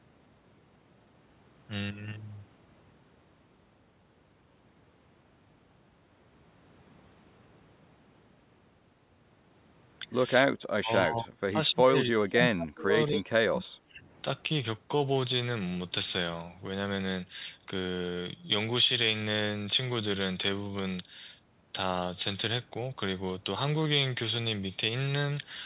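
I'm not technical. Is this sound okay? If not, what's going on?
No. Around 10.43 to 10.55 seconds the voice briefly dips, then from 10.76 to 14.04 seconds it sinks much lower. This is likely speech suppressed in double talk: both sides spoke together, and the call's echo control turned this voice down.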